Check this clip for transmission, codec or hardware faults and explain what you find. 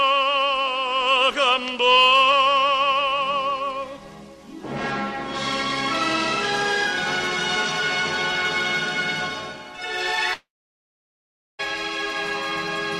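There is one fault, a long network dropout from 10.33 to 11.61 s. The likely cause is that incoming packets stopped for about 1.26 s, so the receiver had nothing to play and filled the gap itself. It briefly extends the last sound as a fading buzzy tail, then leaves silence for roughly 1.14 s. Audio resumes at 11.61 s with that stretch simply gone.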